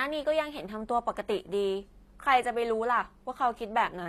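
Speech runs the full clip with HE-AAC compression damage that is plainly audible throughout: the treble stays bright yet sounds synthetic, and s sounds come out gritty and lispy, the kind of result that fits a bitrate around 24 kbps. The likely cause is spectral band replication, which copies lower bands upward to fill in the top. This differs from a plain low-pass cut, where the highs would simply go dull and missing rather than grainy.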